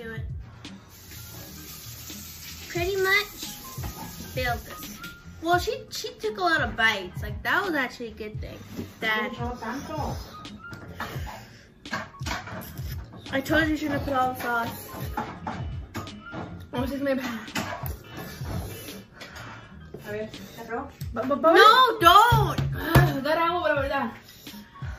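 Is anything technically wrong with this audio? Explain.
Yes. From 2.01 to 3.47 s and again from 20.48 to 21.96 s, the sound suddenly runs 5.75% fast and rises about 97 cents, nearly a semitone, then snaps back. This is likely a drift correction step, where clock-matching software briefly changed the playback rate to rebalance its buffer.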